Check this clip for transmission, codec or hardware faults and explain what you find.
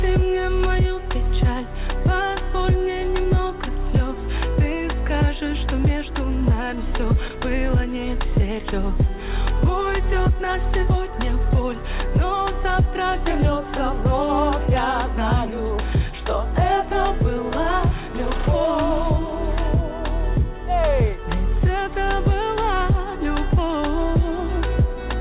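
There's one fault, a short concealed packet loss at 7.28 to 7.32 s. About 20 ms of audio never arrived, so the receiver stretched the preceding sound to cover the gap and then blended back in. You hear it as a quick smear or wobble, and anything very brief there can drop out. The call path itself sounds as expected. Nothing comes through above 4 kHz, which fits narrowband G.711 mu-law at 64 kbps.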